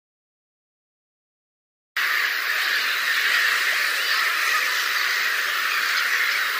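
Cut-off start at 1.97 s: capture began late, so digital silence runs until the sound cuts in abruptly mid-event, with no natural attack or fade-in.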